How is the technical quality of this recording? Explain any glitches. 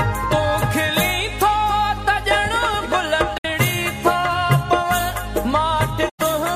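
The recording has two brief gaps where the sound drops to silence: AAC frame loss with muting, at 3.38 to 3.45 s and again at 6.09 to 6.20 s. In each case AAC frames went missing and the decoder zeroed their spectrum. The first hole, about 64 ms, fits roughly three lost frames; the second, about 107 ms, fits roughly five. Because AAC frames overlap, the sound fades out and back in over about a frame rather than cutting off. That soft-edged silence distinguishes it from a hard sample dropout, which starts and stops abruptly.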